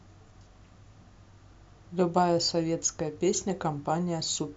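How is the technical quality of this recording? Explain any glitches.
No glitches or faults detected.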